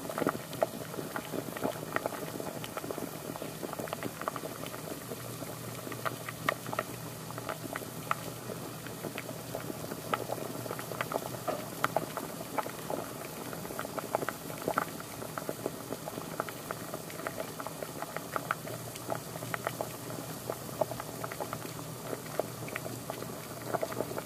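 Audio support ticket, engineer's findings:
Sample clock jitter throughout the clip. Hiss and roughness riding on the sound, strongest on loud, bright passages, gone in silence. Probable component: converter clock. Timing wanders by a few microseconds, so error grows with waveform slope, around 20 dB below signal.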